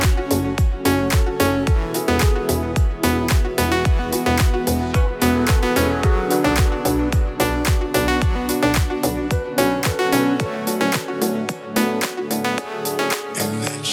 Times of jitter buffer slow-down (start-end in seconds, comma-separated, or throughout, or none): none